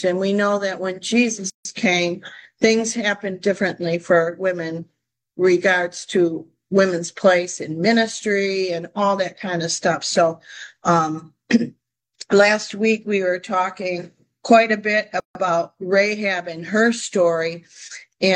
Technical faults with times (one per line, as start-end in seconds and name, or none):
1.50-1.65 gap at a join of encoded pieces
15.20-15.35 gap at a join of encoded pieces